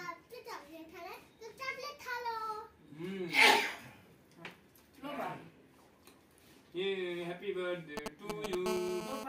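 A nearby 2G phone breaks into the last second of the sound. From 7.97 to 8.55 s there are GSM signalling bursts. They come as a galloping dit-dit-dit of ticks and short buzzes. The phone is only exchanging control traffic with the network, so it transmits in brief groups. The audio circuit rectifies each radio pulse, and the groups of pulses become clicks and buzz fragments. They sit at roughly the same loudness as the sound itself.

A steady GSM phone buzz follows, from 8.66 to 9.24 s. This is a hard, raspy tone at 217 Hz, rich in harmonics and unrelated to the sound. It fits a phone now in a call and transmitting continuously, with bursts arriving 217 times a second. The circuit again demodulates the radio pulses into audio. The buzz is about 5 dB below the sound.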